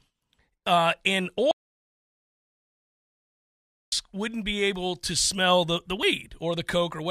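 At 1.51 s the speech stops mid-flow and the audio drops out to silence, returning abruptly at 3.92 s. About 2.4 s of material is gone, and the gap holds silence with no room tone. The likely cause is a lost input, with the recorder writing silence meanwhile. On a waveform the trace collapses to a flat line; on a spectrogram it shows as a blank vertical band with hard edges.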